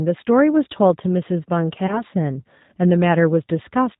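G.729 codec damage runs through the whole of this speech clip and is plainly audible: nothing is heard above 4 kHz, and the voice has the slightly rough, synthetic grain of a codec that rebuilds each 10 ms frame from a vocal tract filter, a pitch predictor and a few pulses rather than sending the waveform, which fits the 8 kbit/s G.729A variant. VoIP packet loss concealed by the speech codec follows at 1.87 to 2.03 s. The decoder fills a gap that fits about 20 ms of missing audio, two lost 10 ms frames, by extending its last pitch and filter at falling gain, giving a brief stretched, fading sound. Because each frame depends on the one before, the voice stays weak and distorted for roughly 160 ms in all, well past the gap itself.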